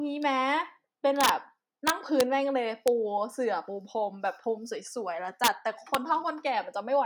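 A speech clip with integer overflow: loud peaks wrap to the opposite sign instead of being limited, giving violent cracks at 1.21–1.29 s and 5.44–5.48 s (about 4 dB over), 1.88–2.21 s, 2.88 s and 5.95 s. Clipping only flattens peaks, so it is far gentler than these full-range flips.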